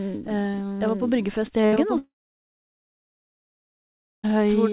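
Doubled audio track, throughout: a full-band copy runs about a second behind the original at roughly equal loudness, with no decay or room colour, likely from a second, slower capture path or an edit holding two copies.

Burst of packet loss, 1.66 to 1.74 s: about 60 ms of audio never arrived, so the receiver stretched the last sound into a fading buzz or hiss before resuming further on.

Short concealed packet loss, 1.74 to 1.78 s: another 20 ms hole is patched by continuing the preceding sound and blending back, heard as a brief smear or wobble.

Long network dropout, 1.98 to 4.25 s: the last sound fades out quickly, then roughly 2.1 s of silence follows, likely because no packets arrived. Audio returns at 4.25 s with about 2.3 s missing.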